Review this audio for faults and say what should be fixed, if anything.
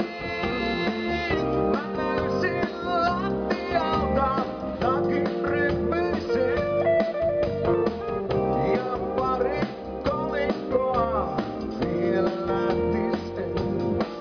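No faults turn up in this audio, so nothing needs to be fixed.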